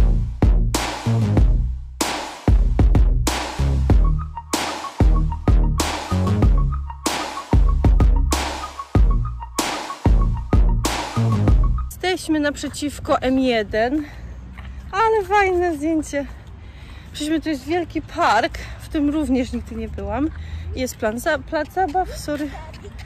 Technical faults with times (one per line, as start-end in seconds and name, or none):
none